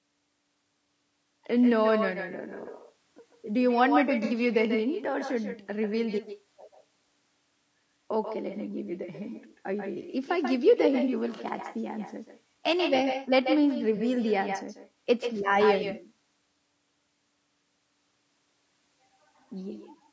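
Echo with no canceller runs through this whole speech recording: every phrase is shadowed about 8 dB down by a thinner copy arriving roughly 150 ms later, as the far end's loudspeaker leaks into its microphone and returns over the network uncancelled. Codec roughness is also audible throughout, with grainy, noisy texture between the harmonics and a synthetic-sounding top band, likely from low-delay AAC compression (AAC-ELD), which fits a low bitrate around 32 kbps, where short frames resolve pitch poorly. AAC frame loss with concealment appears at 4.25–4.34 s (60 ms), 11.36–11.41 s and 13.97–14.01 s (30 ms each) as brief smeared patches where the decoder rebuilt missing frames from the last good spectrum. The call microphone processing's band limit, with nothing above 8 kHz, is normal and not a fault.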